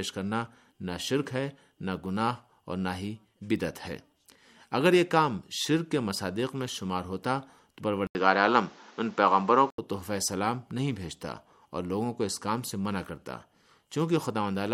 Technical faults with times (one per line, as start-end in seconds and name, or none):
8.07-9.78 input switched to a poorer device